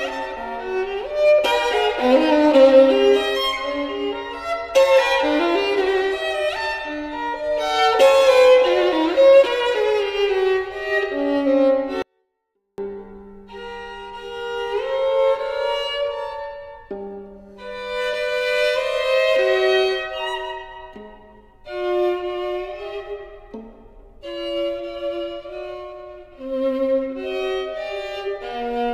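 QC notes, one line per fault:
12.02–12.78 s, 24-bit alignment error (too quiet): 24-bit samples sitting in the low bytes of 32-bit words are read as full 32-bit integers, so the sound stays clean but falls about 48 dB, nearly inaudible. The waveform collapses to a flat sliver; the spectrogram shows a uniformly faded band.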